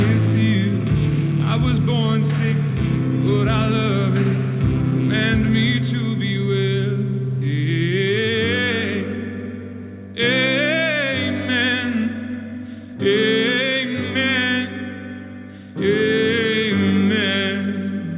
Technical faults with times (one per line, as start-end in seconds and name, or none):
none